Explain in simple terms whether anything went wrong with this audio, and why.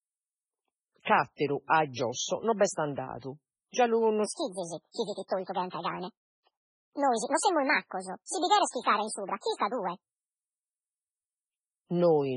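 The whole recording sounds watery and swirly, with nothing above about 10.6 kHz. That is heavy damage, likely from MP3 compression squeezing the sound into too little data and dropping detail.

From 4.26 to 10.03 s the speech turns high and hurried, about one and a half times too fast and roughly seven semitones up. This is a section at the wrong speed, where that part was likely played back against the wrong clock, so pitch and tempo rose together.

Pre-echo appears three times, at 1.03 to 1.07 s (just before "atteru a"), 8.69 to 8.74 s and 9.55 to 9.60 s. Each time a brief hiss of about 40 to 46 ms leads into a sharp sound, because the codec spread its noise across the quiet moment before it.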